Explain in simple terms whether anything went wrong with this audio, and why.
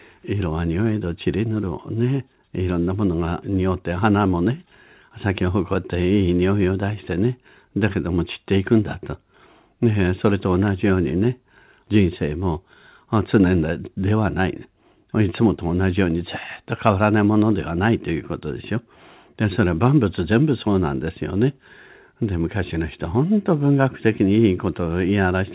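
Nothing went wrong with this speech recording; it just has the narrower, phone-like sound you'd expect from an ordinary call line, which carries nothing above about 4 kHz.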